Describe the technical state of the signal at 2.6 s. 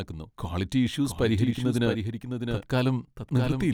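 At 2.6 s the speech is heard twice: a second, full-band copy trails the original by roughly 0.7 s, around 5 dB quieter, with no decay or room colouring, so it lands as a distinct, clean repeat rather than an echo. This doubled audio track runs through the whole clip. The likely cause is the same signal being captured a second time over a slower path, or an edit leaving two copies out of step.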